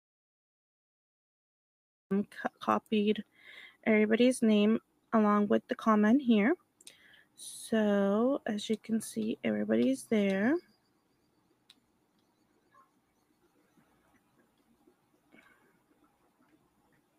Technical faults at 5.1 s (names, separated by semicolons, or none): noise suppressor applied to music or sounds; sound cut by the noise suppressor